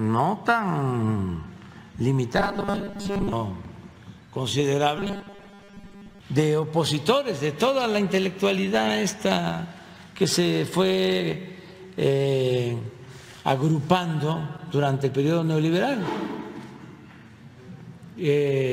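From 2.37 to 3.32 s and again from 4.97 to 6.19 s, the sound turns into a rigid metallic buzz at 200 Hz. It is robotic sound from repeated short buffers, likely a 5 ms chunk replayed while most of the real audio is skipped. The fixed pitch under the sound separates it from dropout gaps.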